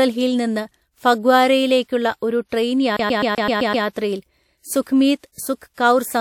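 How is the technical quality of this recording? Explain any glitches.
There's one glitch in this speech recording. From 2.97 to 3.86 s it's a CD stuck on one turn: a scratch keeps kicking the laser back a track, so a 128 ms slice repeats seven times, with a short mute at each jump.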